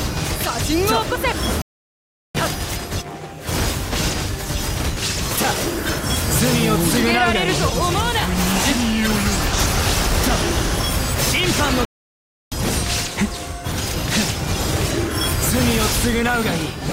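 At 1.62 s the sound stops dead for about 0.73 s, and again at 11.85 s for about 0.67 s: two playback stalls, likely from the player running out of buffered data or its thread being blocked, leaving silence until output recovers mid-flow.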